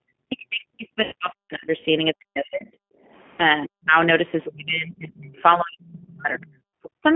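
G.729 coding runs through the whole clip, at 8 kbit/s in the G.729A form, with the line band held to about 200 Hz to 3.4 kHz. The codec rebuilds speech from a vocal tract filter, a pitch predictor and a few pulses per frame rather than sending the waveform, and that damage is plainly audible across the speech. The lowest bass is also trimmed by the call's microphone high-pass, which is normal.

Speech suppressed in double talk appears from 0.21 to 2.83 s, and again at 3.67 to 3.92 s, 4.51 to 6.47 s and 6.95 to 7.04 s. The talker's level drops by as much as about 40 dB, and by about 35 dB in the 4.51 s stretch. This is likely an echo canceller treating the talker and loudspeaker echo as one and turning both down.

VoIP packet loss concealed by the speech codec interrupts the first suppressed stretch at 1.03 to 1.14 s, where about 90 ms is missing, which fits three lost packets. A second gap at 3.36 to 3.43 s loses about 30 ms. 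The decoder fills each gap by extending its last pitch and filter with falling gain, so the sound smears into a fading tone or coloured noise. The speech stays weakened briefly after packets return.

The other side's voice leaking through is heard at 4.44 to 4.52 s, about 15 dB below the speech, and at 5.87 to 5.92 s, about 25 dB below. Both are short scraps, likely left behind when the echo canceller failed to fully remove the loudspeaker's output from the microphone.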